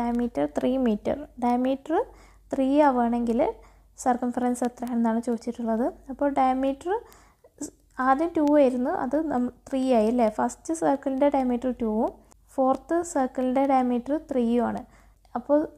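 From 0.15 s to 15.67 s there are word clock ticks, sharp clicks roughly every fifth of a second, as an unlocked receiver slips a sample against a sender about 100 ppm off.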